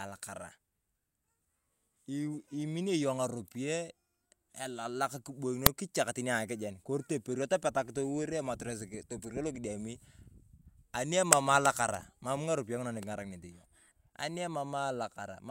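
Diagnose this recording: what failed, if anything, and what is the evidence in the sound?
Uninitialised buffer at 5.66 s, a failure at the driver or buffer stage. The speech is cut by a loud crack lasting about 2.67 ms, which fits a single 128-sample buffer. That block reached the output before any audio was written into it, so whatever values were left in that memory were played as if they were samples. The burst is not part of the speech, and its level bears no relation to the surrounding audio.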